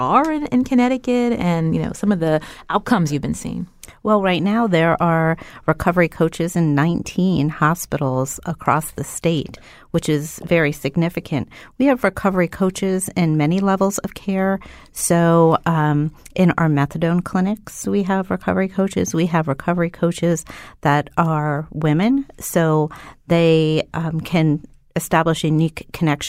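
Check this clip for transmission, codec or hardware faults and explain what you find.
No transmission, codec or hardware faults are audible here.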